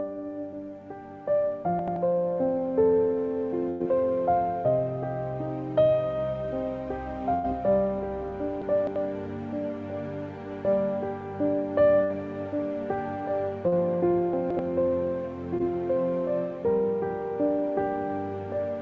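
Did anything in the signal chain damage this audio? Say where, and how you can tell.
Yes. Chunks out of order at 1.79 to 1.96 s, 8.62 to 8.96 s and 14.33 to 14.59 s point to the buffer stage. A segment of roughly 85 ms plays one, three and two segments late, leaving hard joins. Unlike packet loss, nothing goes missing; the sound is only jumbled.

A burst of packet loss on the network stage of this call path, whose band stops at 8 kHz as G.722 would, occurs at 3.70 to 3.82 s, 7.34 to 7.46 s and 12.04 to 12.12 s. Each holds the last sound as a fading buzz or hiss for about 100 ms, or 60 ms in the last case, then jumps ahead past the missing stretch.

Short concealed packet loss at 13.68 to 13.74 s and 15.58 to 15.61 s is also network damage. The decoder bridges 40 ms and then 17 ms by extending the preceding sound, heard as a brief smear or wobble. These gaps are too short for the audible held tail of the longer bursts.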